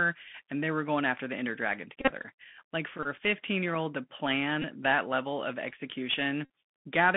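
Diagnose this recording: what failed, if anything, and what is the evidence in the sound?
Speech sounds boxed and scratchy, confined to roughly 150 Hz to 3.5 kHz, with granular hiss and gritty s sounds. This is the Bluetooth CVSD headset codec, whose one-bit adaptive delta coding fits a 64 kbps link.

Brief buzzes near 267 Hz occur at 2.01–2.11 s (runs up to about 30 ms), 3.03–3.07 s, 4.62 s and 6.45–6.50 s. These are Bluetooth headset packet repeats: radio-link losses patched by replaying the previous 3.75 ms packet.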